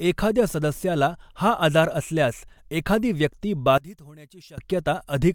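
At 3.78 s, right after "आजार असल्यास एखादी व्यक्ती", the speech drops by about 22 dB and turns faint until 4.58 s. The likely cause is one channel inverted: the centred signal cancels in the mono sum, leaving only a faint channel difference.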